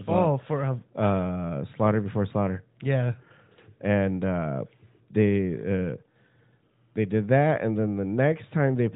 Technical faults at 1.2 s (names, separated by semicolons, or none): none